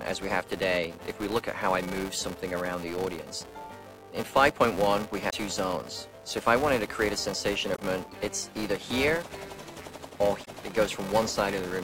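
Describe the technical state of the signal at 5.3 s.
Between 5.27 and 5.34 s there is damaged data in a compressed stream. The decoder misreads corrupted frames, loses sync and hunts for the next frame header, producing a brief chirp, squawk, click or short hole.

Underneath, the filter restarted on every block is still present. Each block starts from a cleared state, so a small transient repeats as a steady buzz at 345 Hz, which fits a 128-sample block. That rise and fall with the signal's level separates it from a fixed hum.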